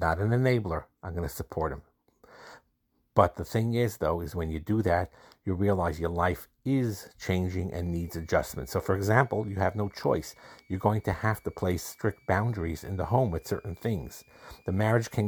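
From 7.82 s to the end at 15.27 s, a switching supply whistle sits under the speech. A power supply is cycling at an audible rate. It sounds like a thin, quiet whistle, wandering between 2.2 and 2.4 kHz.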